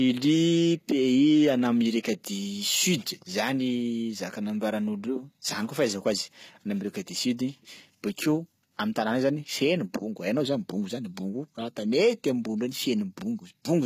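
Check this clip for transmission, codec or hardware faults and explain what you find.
One codec fault runs through the whole clip: the speech carries plainly audible damage consistent with HE-AAC compression. From start to finish the sibilants come out gritty and metallic, and nothing is present above 14.9 kHz. The likely mechanism is spectral band replication at a low rate, which fits roughly 20 kbps. Only the lower spectrum is coded, and the treble is patched in from copied lower bands under a coarse envelope, so upper harmonics fail to line up with the real ones. What separates this from plain low-pass bandwidth limiting or MP3 smearing is that the top end still sounds bright, but synthetic.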